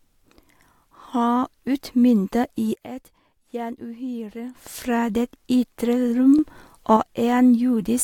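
At 2.74 s, just before "fra det ytre", the speech and its background noise drop together by about 12 dB, recovering at 4.55 s. At 6.39 s both rise by about 6 dB until 6.97 s. Each is a sudden gain jump, likely an unramped digital gain change.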